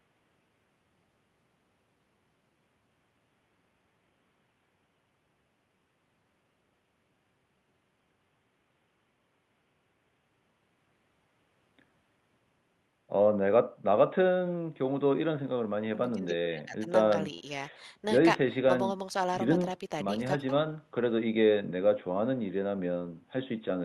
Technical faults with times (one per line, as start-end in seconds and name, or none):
none